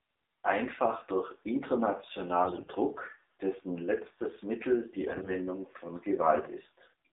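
AMR narrowband mobile codec, throughout: the sound is confined to roughly 200 Hz to 3.7 kHz and has a plainly buzzy, synthetic edge, which fits a low 7.4 kbps mode where each frame's vocal-tract model gets only a handful of pulses to rebuild the voice.

AMR bit errors, from 2.44 to 2.72 s and again from 5.08 to 5.33 s: flipped bits in the weakly protected parts of the frames misplace the excitation pulses and skew pitch, gain and spectral detail. Pitch and level hold roughly steady, but the voice turns hoarse and gargly, more harshly in the heavier first burst.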